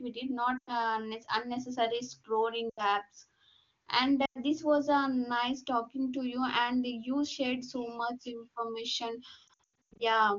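Lost AMR speech frames hit at 0.57–0.71 s, at 2.69–2.90 s after "unnecessary scrolling", and at 4.25–4.38 s before "this was a nice". Corrupted frames were discarded. The decoder stretched the last good sound with falling gain, so it drops to near silence within two frames. From 9.47 to 10.02 s, brief dropouts scatter, each up to 100 ms.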